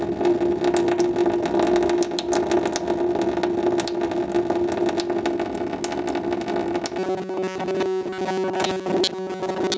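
Gain pumping runs through the whole clip, a swing of around 10 dB, so loud and quiet moments sit unnaturally close in level. The likely cause is input gain set far too high with a fast limiter clamping it back down. A noise gate would cut the gaps to silence; pumping instead rides the overall gain up and down.

From 6.99 s to the end at 9.78 s the audio turns into robotic sound from repeated short buffers: a rigid metallic buzz at 188 Hz that still roughly follows the shape of the sound. This is likely because new audio arrived too seldom and the player looped its last few milliseconds, discarding most of the real material. The 188 Hz pitch fits a repeated slice of about 5 ms. A pitch shift or vocoder effect would track the original, but this buzz holds one fixed pitch whatever the source does. Over the whole clip, the call microphone processing leaves nothing above 8 kHz.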